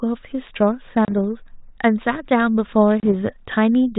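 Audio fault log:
1.05–1.12 s and 3.00–3.08 s: packet loss on an ADPCM call on this 32 kbit/s G.726 speech. About 30 ms of audio, likely a few packets, drops to hard-edged silence. The decoder's adaptive predictor and step size lose track of the sender's, so speech resumes with brief distortion before settling.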